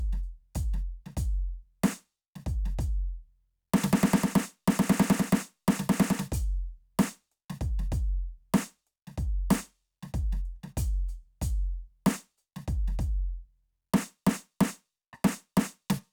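No technical faults can be heard anywhere in this music recording. There are no dropouts, clicks or glitches to report at any point.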